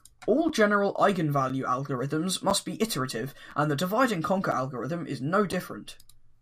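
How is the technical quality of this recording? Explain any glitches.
The speech is broken up by a gap between chunks, six times: at 0.49, 1.5, 2.5, 3.51, 4.52 and 5.52 s. The audio was handled in 1-second blocks, and at each join about 7 ms of silence got inserted before the next block started, so nothing's missing but the flow stops briefly. You hear it as tiny hard-edged dropouts ticking along once a second, like a regular stutter.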